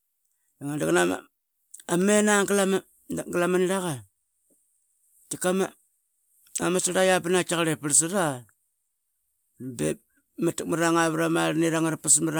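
Listening through the speech recording, nothing stood out as a technical fault at any point.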